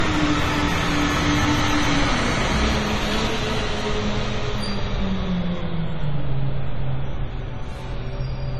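Sounds with a hard ceiling near 12.5 kHz throughout, with nothing above it; this is likely low-bitrate audio saved at a high bitrate, an earlier lossy pass that the later high-rate MP3 cannot restore.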